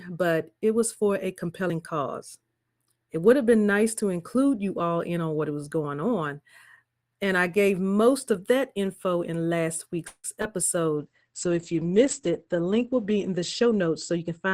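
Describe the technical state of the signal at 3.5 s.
At 3.5 s the speech signal is intact, with no audible fault at that moment.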